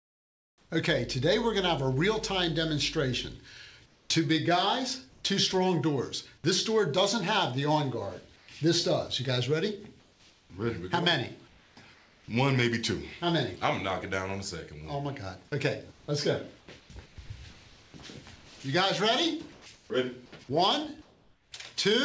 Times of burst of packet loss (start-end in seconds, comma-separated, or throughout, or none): none